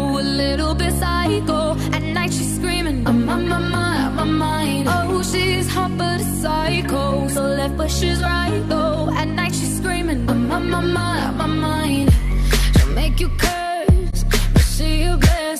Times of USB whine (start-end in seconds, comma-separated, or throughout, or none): none